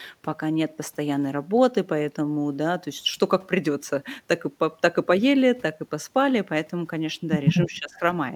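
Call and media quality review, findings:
Speech suppressed in double talk, 7.67–8.02 s. During overlapping talk, the echo canceller likely failed to separate near-end speech from loudspeaker echo and attenuated both. Near-end speech drops by roughly 15 dB for about a third of a second.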